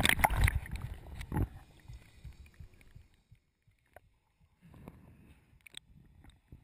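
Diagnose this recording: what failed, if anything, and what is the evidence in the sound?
Nothing in the recording points to a failure at any stage of the chain. Where the level is brought up or down it glides like a fader move, without steps or jumps.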